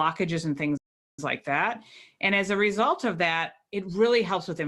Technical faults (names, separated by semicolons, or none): playback stall